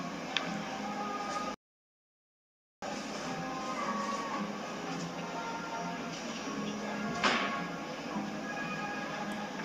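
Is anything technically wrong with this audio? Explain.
Yes. At 1.54 s there is a rebuffering stall. The player exhausted the audio it had already downloaded and had to halt playback until more data arrived. It picked up again at 2.82 s. You hear the sound drop abruptly into silence for about 1.28 s and then carry on from exactly the point where it broke off. No material is skipped or repeated, but the gap adds that much time to the playback.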